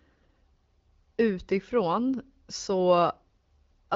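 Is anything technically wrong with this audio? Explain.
No, nothing in this speech clip points to a technical problem. It carries the band-limited sound of an AMR wideband (HD Voice) call at 12.65 kbit/s, with the codec's touch on the speech staying light.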